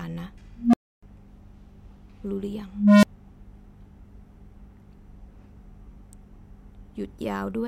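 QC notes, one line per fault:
0.56 to 1.03 s, unstable filter. A low tone of around 200 Hz swells over about 0.17 s and clips. Then the sound drops out for about 0.29 s. A recursive filter has run away, and its output grew until the values overflowed.
2.68 to 3.04 s, unstable filter. The same low tone of around 200 Hz builds more slowly, over about 0.35 s, and clips. Only a very brief gap of about 9 ms follows before the filter resets.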